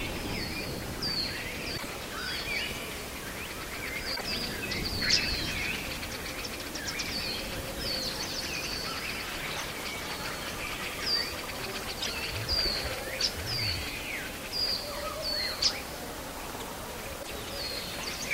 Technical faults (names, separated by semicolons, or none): damaged data in a compressed stream